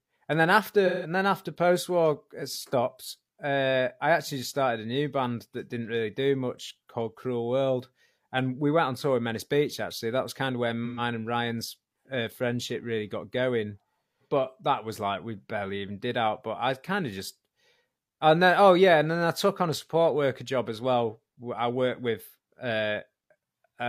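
At 0.86 to 1.10 s, after "and then", and 10.85 to 11.01 s, after "was kind of where", AAC frame loss with concealment leaves smeared, phasey patches. The decoder re-synthesised the last good spectrum, which shows as blurred, streaky bands on a spectrogram.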